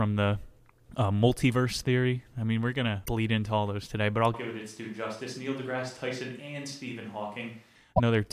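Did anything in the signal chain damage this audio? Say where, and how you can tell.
Yes. At the codec stage, a broken MP3 bit reservoir is the likely cause of the brief skip at 3.05–3.09 s, between "mean we're going to" and "into all those today", and again at 7.96–8.00 s. Each lasts under two 26 ms frames.

At capture, the audio turns hollow, roomy and about 10 dB quieter from 4.34 s, after "those today but I'll", until 7.75 s. The abrupt switch both ways points to a likely switch to a distant microphone rather than gradual gain drift.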